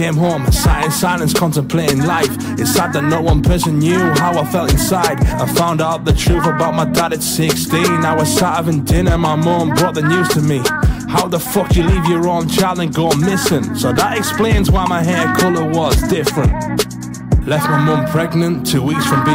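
Hard clipping runs through the whole clip: the signal is driven about 6 dB past what one stage can pass, so around three percent of samples hit the ceiling and are cut flat. Those flattened peaks add high harmonics, heard as crackle on the louder moments.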